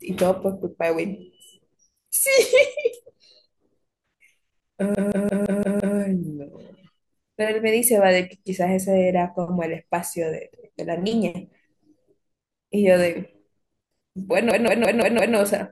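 At 4.95 to 5.97 s, and again at 14.51 to 15.36 s, the speech hits a system hang loop: the driver stalls while the hardware keeps replaying one 171 ms chunk, fitting an 8192-sample buffer, about 5.9 times a second, for a machine-gun stutter.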